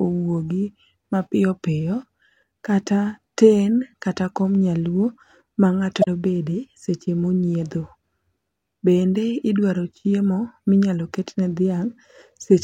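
Damaged data in a compressed stream appears at 6.00 to 6.08 s in this speech clip, a disturbance of about 80 ms. Corrupted bytes in the encoded stream leave the decoder unable to interpret the frames there, so it loses its place and hunts for the next valid frame header before playback resumes. The result is a brief chirp or squawk breaking into the speech.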